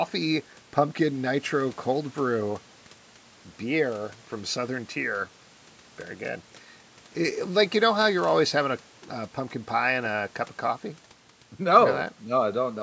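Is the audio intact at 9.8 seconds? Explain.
Yes, the speech at 9.8 seconds is intact, with only the normal call microphone processing audible, which trims the lowest bass and leaves nothing above 8 kHz.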